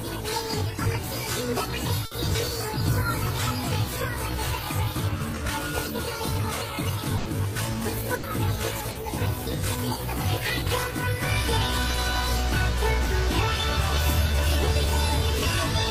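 At 2.05 s there's a burst of packet loss: a run of audio arrived too late or not at all, and the receiver covered about 60 ms by continuing the last sound and fading it down, so you get a held buzz or thinning hiss before playback jumps ahead. It happens again at 7.17 to 7.27 s and 8.15 to 8.25 s, each covering about 80 ms, and both times the stretch that should have been there is simply skipped.

Then there's short concealed packet loss at 8.91 to 8.97 s, roughly 40 ms filled, and again at 14.65 to 14.69 s, about 20 ms. These are smaller holes: the decoder extrapolated from what came just before, as pitched continuation or shaped noise, and blended back into the real signal. They're brief enough to come across as a quick smear or wobble, and a short transient there can just drop out.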